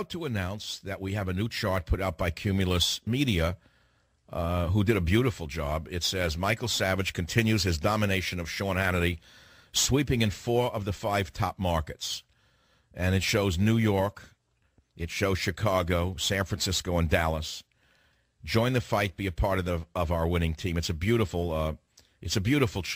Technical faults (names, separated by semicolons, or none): none